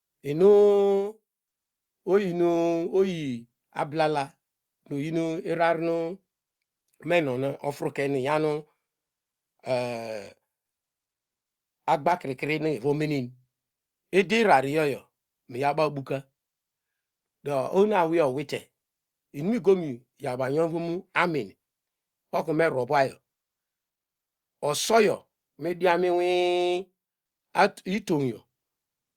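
No audible technical faults.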